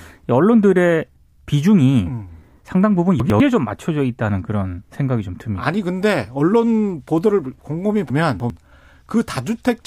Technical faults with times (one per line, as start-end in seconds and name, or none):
3.20-3.40 chunks out of order
8.10-8.50 chunks out of order